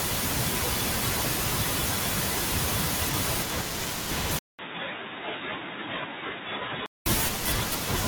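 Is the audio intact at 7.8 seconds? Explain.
Yes, the audio is intact at 7.8 seconds, with no dropout, click, distortion or other fault at that point.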